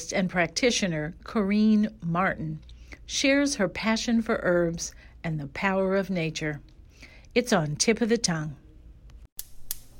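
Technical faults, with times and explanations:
Nothing stood out on listening to the speech in this recording.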